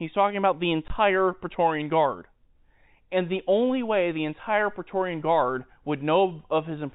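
A single packet went missing at 0.88 to 0.90 s, just after "talking about the", and the receiver filled the gap with silence. This packet loss, with the hole filled by silence, leaves a 20 ms dropout with abrupt edges, over a G.711 telephone band limited below 4 kHz.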